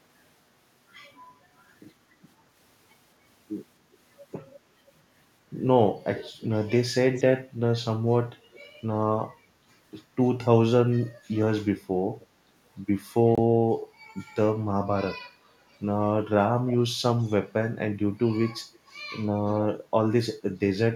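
Echo leak occurs at 6.16–6.47 s, 7.12–7.24 s, 8.52–8.68 s and 12.20–12.27 s, with later occurrences after the dropout. A faint delayed copy of the speech trails the original by about 284 to 297 ms, sitting about 15 to 30 dB below it. This is likely loudspeaker pickup that the far end's echo canceller failed to remove.

Bluetooth dropout occurs at 13.35–13.39 s. The audio cuts to silence for a moment and then resumes as though it had kept playing. The gap fits one late packet of about 23 ms being dropped before it reached the headphones.

Echo leak returns at 16.68–16.76 s, 17.19–17.37 s and 19.38–19.62 s, again as quiet trailing scraps. Its delay keeps creeping upward, from about 307 to 313 ms.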